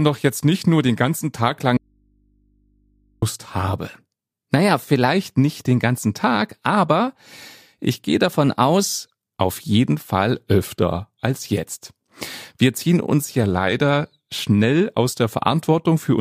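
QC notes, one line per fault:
1.77–3.22 s, audio dropout to a faint residue: the speech cuts out abruptly for about 1.45 s and only mains hum remains, roughly 40 dB below the signal. This is likely a break in the source while the downstream input stayed open and live.
3.89–5.07 s (ending before "nicht den ganzen"), 8.30–8.98 s (between "ich gehe" and "auf jeden"), 13.43–14.28 s (after "ziehen uns ja"), drift correction steps: the first two speed up playback by 6.03% and raise pitch 101 cents. The third slows it by 6.03% and lowers pitch 108 cents. Each step snaps back at its end, and the shifts are likely clock-matching rate jumps.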